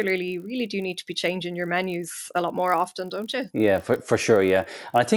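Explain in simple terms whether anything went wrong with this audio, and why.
A steady buzz runs under the speech for the whole clip, present only while sound is playing. This is a resampler restarted on every block. The audio was converted to a higher sample rate in short chunks, which fits 24 kHz to 48 kHz in 20 ms blocks. Each chunk was handled without its neighbours, so every join carries a tiny error, and fifty joins a second add up to a 50 Hz buzz.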